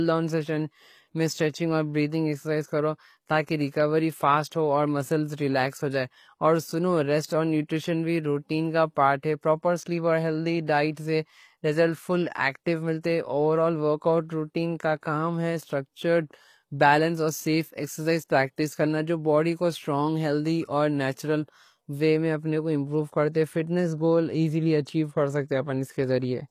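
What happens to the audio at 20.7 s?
At 20.7 s the speech carries the same HE-AAC compression damage as the whole clip: gritty, lispy sibilants and nothing above 15 kHz, likely from treble rebuilt at around 24 kbps.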